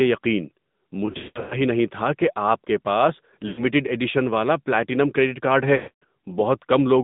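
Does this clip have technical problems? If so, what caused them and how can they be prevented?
Yes. The whole clip runs through the AMR narrowband mobile codec at 10.2 kbps, so everything sits between 150 Hz and 3.7 kHz. The thin, buzzy, synthetic edge comes from the vocal-tract model squeezing speech into very few bits. Recording over a wideband or higher-rate path would prevent it.

There are also lost AMR speech frames at 1.06–1.58 s (just before "نہیں تھا کہ آپ"), at 3.48–3.65 s (between "کہ آپ کے پاس" and "ایڈیشن والا پلاٹینم کریڈٹ") and at 5.76–6.04 s (after "والا پلاٹینم کریڈٹ کارڈ"). When frames fail, the decoder keeps repeating its last pitch and tract settings at falling gain, so the sound smears and fades. A steadier radio link would prevent it.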